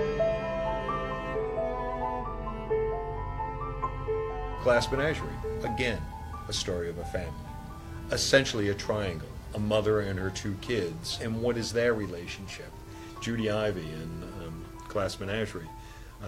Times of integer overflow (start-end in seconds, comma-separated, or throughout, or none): none